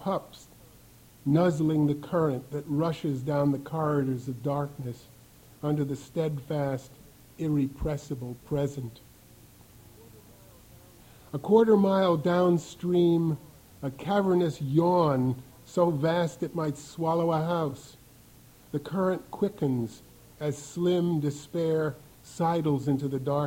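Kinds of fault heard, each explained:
No kinds of fault are heard in this clip.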